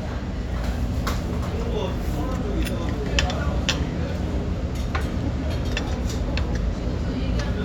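Nothing stood out as a problem on listening to this recording of everyday sounds.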